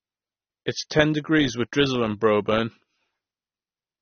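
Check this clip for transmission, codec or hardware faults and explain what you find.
AAC compression at a low bitrate is the likely cause of the damage here. It runs through the whole clip. The coder lowers the cut-off and thins the remaining spectrum, which fits a bitrate around 24 kbps. The speech sounds dull and smeared, with fizzy, warbling sibilants.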